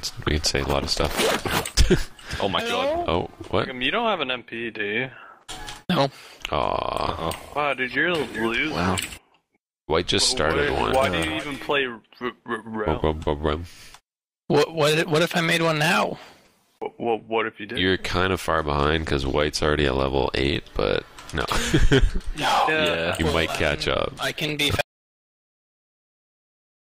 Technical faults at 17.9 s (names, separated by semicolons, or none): none